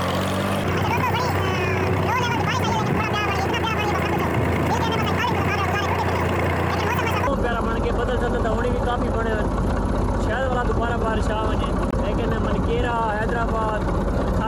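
From the start to 7.27 s the sound runs high and hurried, everything rushing past at 1.89 times its proper pace and lifted by around ten semitones, then it snaps back to normal speed and pitch for the rest. This is a section at the wrong speed: because pitch and tempo shift together, that stretch was likely played back against a mismatched clock rather than processed with time-stretching or pitch-shifting.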